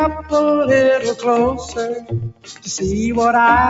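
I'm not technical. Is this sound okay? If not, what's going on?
No. A noise suppressor meant for voices was applied to this sound. It treats steady parts as noise, so the level keeps dipping and pumping. The noise suppressor also cut the sound twice, from 1.52 to 1.78 seconds and from 1.94 to 2.68 seconds. Held parts fade suddenly there, and the second dip is deeper.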